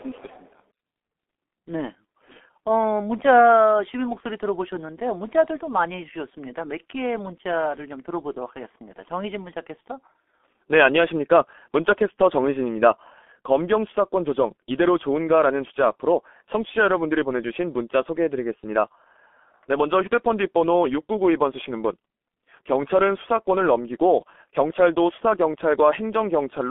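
G.723.1 codec damage runs throughout: speech is confined to roughly 250 Hz to 3.5 kHz, and coarse 30 ms frames leave it muffled and hoarse, consistent with about 6.3 kbit/s.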